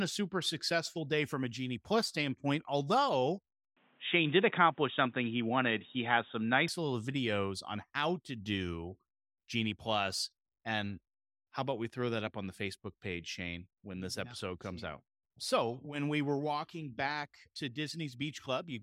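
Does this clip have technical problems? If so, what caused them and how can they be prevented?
Yes. From 3.77 to 6.68 s the speech turns dull and boxy, losing everything above 3.8 kHz, shifting in level by roughly 5 dB and gaining a faint new noise floor, then clears again with no gap. The likely cause is the input switched to a poorer device. Locking the recording to one microphone and disabling automatic device switching would prevent this.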